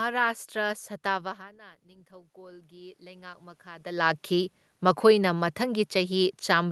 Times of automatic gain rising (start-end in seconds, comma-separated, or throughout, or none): 1.45-3.97